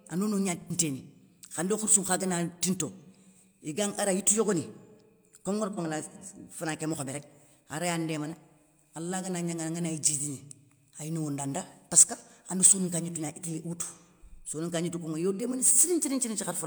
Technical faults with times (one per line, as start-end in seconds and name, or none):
0.62-0.72 AAC frame loss with concealment
5.73-5.79 AAC frame loss with concealment